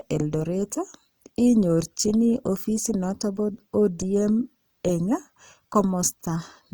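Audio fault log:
Throughout: Opus compression. The speech carries a plainly audible grainy, rough texture, with noisy fill where finer spectral detail should be. This is likely Opus in its music mode, keeping each band's energy but substituting folded or noise-like content when bits run short, so the damage sounds coarse rather than swirly. Bandwidth stays full, with content reaching about 20.3 kHz. The amount of roughness fits a bitrate of around 24 kbps.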